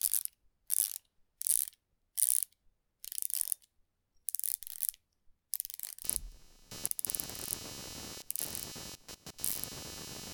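A recording of everyday sound whose audio ground is being disturbed by the computer's changing processing load from 6.04 s to the end at 10.34 s. The result is computer activity noise: a buzzy, chirping pulse train near 300 pulses per second, sitting roughly 10 dB below the sound.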